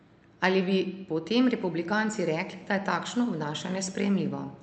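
Speech carried over a call path, band-limited at 8 kHz. From 2.23 s to 4.61 s, automatic gain rising lifts the level about 3 dB. Voice and background swell together as the gain control compensates for quiet input.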